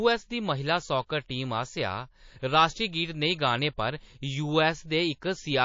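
Across the whole clip the speech carries plainly audible codec damage, likely from MP3 compression at a low bitrate such as 32 kbps. Weak frequency components flicker between frames, giving a watery, swirly texture with chirpy sibilants.

At 1.07 to 1.09 s a pre-echo puts a short hiss about 29 ms ahead of an attack, with noise about 14 dB above the surrounding floor. A second pre-echo, at 2.40 to 2.43 s just before "राश्ट्री गीत", spreads about 31 ms and rises about 15 dB. In both cases the encoder kept its long transform window of roughly 72 ms instead of switching to short blocks, so the quantisation noise meant for the loud onset leaks into the quiet moment before it and softens the attack.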